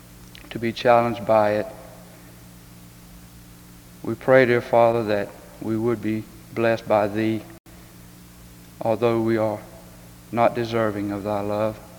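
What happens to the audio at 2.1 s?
Nothing goes wrong at 2.1 s; the audio carries on intact through that moment with no audible fault.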